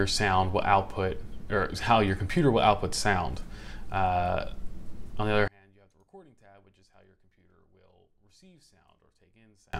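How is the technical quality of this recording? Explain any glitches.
The recording has one clear problem in its second half. From 5.48 s to 9.73 s the sound suddenly collapses by about 32 dB, leaving only a faint trace where the full signal had been. The likely cause is one channel inverted: one stereo side has flipped polarity, so when the two channels are summed to mono, everything common to both cancels out. Centred material and low end almost disappear, and only the small difference between the channels survives.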